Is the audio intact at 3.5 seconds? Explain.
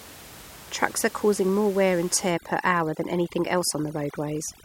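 No. At 3.5 seconds the audio is inside a stretch of overdone noise removal that runs from 2.31 s to the end at 4.64 s. A noise reduction stage is set far too aggressively, so any frequency band close to its noise estimate gets pulled down or shut off entirely. The room noise, sitting about 20 dB below the speech, collapses into near silence dotted with twinkling specks, while the quieter parts of the speech are stripped away.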